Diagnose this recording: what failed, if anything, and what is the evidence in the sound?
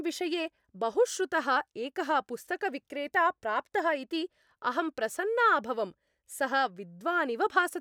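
Nothing failed, and the sound gives no evidence of any fault in the recording.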